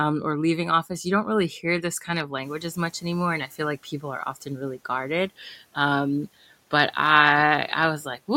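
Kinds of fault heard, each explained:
Noise suppressor catching up: after "hear this kind of", background noise jumps around 2.5 s; the suppressor lags, leaving a brighter noise floor on the spectrogram that sinks about 8 dB by 3.78 s.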